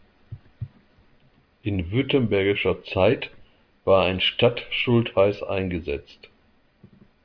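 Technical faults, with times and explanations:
No technical faults can be heard in the speech recording. There is nothing to list at any time.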